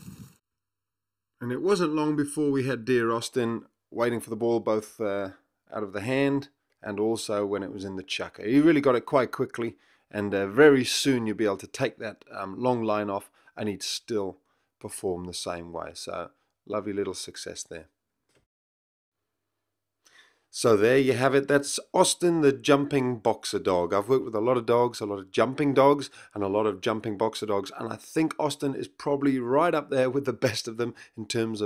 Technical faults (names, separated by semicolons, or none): channel delay (comb filtering)